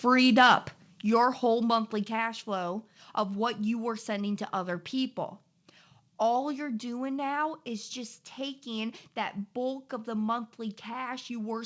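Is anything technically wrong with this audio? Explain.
Yes, there are two faults. Microphone overload, 0.37 to 0.54 s: peaks exceed the converter's limit by about 4 dB and about 7 percent of samples are flattened, likely from input gain set too high, giving a harsh crackle. Microphone volume stepped down, at 1.02 s and 2.04 s: speech and background drop abruptly by about 7 dB and then about 4 dB as input gain is likely lowered in single steps, all within a call path whose sound stops at 8 kHz.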